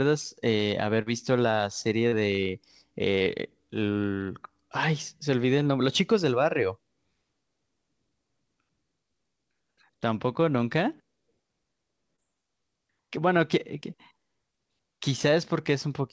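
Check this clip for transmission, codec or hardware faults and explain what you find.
Four short concealed packet losses occur, at 1.02 to 1.08 s, 2.08 to 2.14 s, 3.18 to 3.22 s and 12.16 to 12.20 s. About 40, 40, 20 and 20 ms of audio arrived too late to decode. The receiver extended the preceding sound and then crossfaded back, leaving brief smears or wobbles in the speech. The call path's G.722 coding band-limits everything to 8 kHz.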